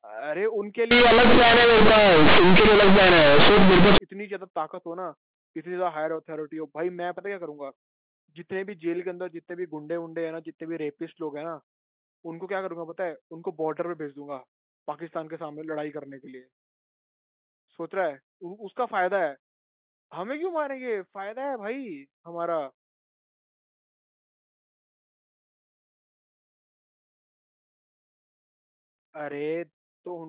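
From 0.91 s to 3.98 s the speech turns into harsh, very loud buzzing with heavy noise filling the gaps: this is companded audio read as linear, where mu-law bytes were played as plain 8-bit samples without expansion. Every sign change throws the output across half its range, so soft passages blare as loudly as strong ones. Unlike clipping, which flattens only the peaks, the distortion here swamps quiet moments too. Around it, the G.711 telephone band sounds normal.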